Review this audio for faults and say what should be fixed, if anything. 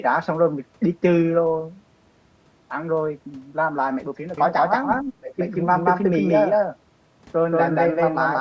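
A doubled audio track runs from 4.38 s to the end: an equally loud full-band copy trails about a fifth of a second behind, likely from a second capture path. On a spectrogram every syllable repeats as a sharp-edged, undecayed shadow. Route the signal through only one capture path.

Speech suppressed in double talk at 5.03–5.38 s: the talker drops deeply, likely because the echo canceller muted everything while both sides spoke. The waveform shows an abrupt envelope hole. Use an echo canceller that handles double talk properly.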